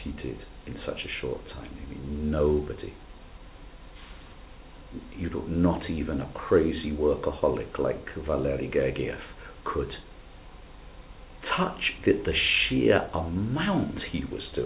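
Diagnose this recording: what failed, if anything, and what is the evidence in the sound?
Nothing here actually failed: the sound arrives over a call path and tops out around 4 kHz, which is just what a G.711 mu-law link at 64 kbps gives you, and nothing beyond that narrowband ceiling stands out.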